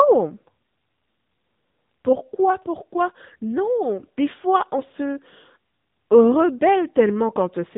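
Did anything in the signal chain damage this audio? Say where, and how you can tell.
Yes. Across the whole clip the speech sounds boxed-in and buzzy, with a synthetic edge. Nothing above 3.8 kHz survives, so sibilants and breath lose their air. That points to the codec stage: an AMR narrowband mobile codec (AMR-NB). It resamples to 8 kHz and rebuilds each 20 ms frame from a vocal-tract model driven by sparse pulses. The plainly audible coarseness fits a mode of around 8 kbps.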